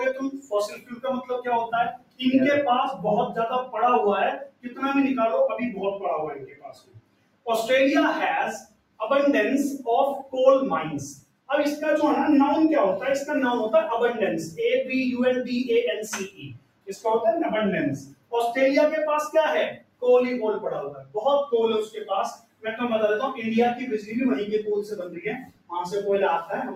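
A noise suppressor applied to music or sounds runs across the whole clip. Tuned for speech, it mistakes sustained tones and ambience for noise and keeps shifting its gain, with the loss swinging by roughly 15 dB, so the sound pumps and thins as attacks survive and tails sink.

Sound cut by the noise suppressor occurs at 0.13 to 7.47 s, 8.6 to 9.01 s, 10.23 to 11.5 s, 16.28 to 17.05 s, 17.98 to 18.33 s, 19.73 to 22.66 s and 24.0 to 25.72 s, dipping by about 20 dB at worst. Held and decaying sound is clamped down, with decays cut short.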